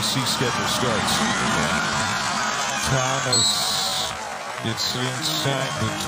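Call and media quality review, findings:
Time-stretched section, 1.22 s to end of clip. Likely a time-stretch stage in the playout or jitter-buffer path, padding the audio to fill a longer slot by repeating short pieces while holding pitch. Playback drops abruptly to about 0.54x speed with pitch unchanged. Audio drags, pace roughly halved.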